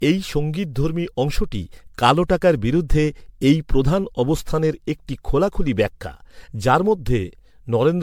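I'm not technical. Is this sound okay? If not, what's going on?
No. Throughout the clip the speech has generation loss: it sounds swirly, hollow and smeared, and the starts of sounds are blurred rather than crisp. The likely cause is that the recording was saved in a compressed format like MP3, then opened and saved again, roughly seven times. Each save throws away a little more detail in slightly different places, so the damage builds up across the whole clip.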